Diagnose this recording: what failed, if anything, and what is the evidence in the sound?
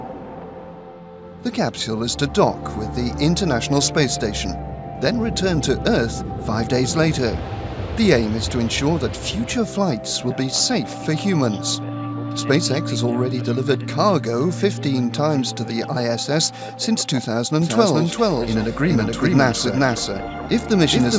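From 17.61 s to the end there's a doubled audio track. An equally loud copy trails about 0.4 s behind and starts abruptly, likely from a second, slower capture path.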